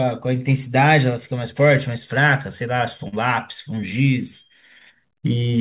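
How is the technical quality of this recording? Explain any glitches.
The recording has one glitch, heard against the narrowband sound of a call line, with nothing above 4 kHz, which fits G.711 A-law at 64 kbps.

From 3.08 to 3.17 s there is a short concealed packet loss. About 40 ms of audio arrived too late for the decoder, so the receiver stretched the preceding sound across the gap, about 43 ms of synthesized fill, and then blended back into the real signal. It comes across as a brief smear or wobble. Unlike a plain dropout, there is no silent hole or hard click, only a soft, slightly frozen patch where a short sound may be missing.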